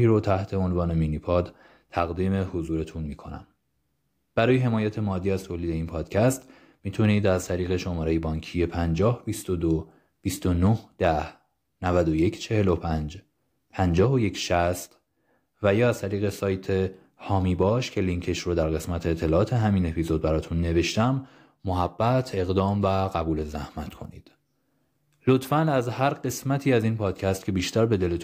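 Throughout the speech, a faint 50 Hz buzz rides under the signal and vanishes in pauses: the resampler restarted on every block. Each 20 ms block was converted from 48 kHz to 44.1 kHz in isolation, so its edges were computed against missing neighbours, leaving a small error every 20 ms. On a waveform, tiny steps recur at 20 ms spacing; a spectrogram shows faint vertical lines at the same interval, present only where speech is.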